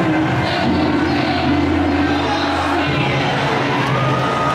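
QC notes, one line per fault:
Throughout, doubled audio track: a full-band second copy trails the original by roughly 0.7 s at a few decibels lower, clean and with no decay or room colour, which is likely the same signal captured again through a slower path and mixed in.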